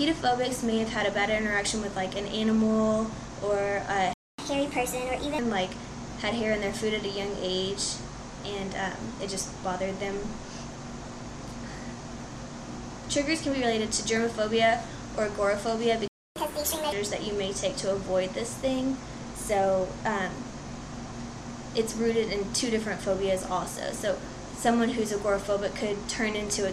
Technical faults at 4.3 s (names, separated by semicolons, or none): playback stall; catch-up at higher speed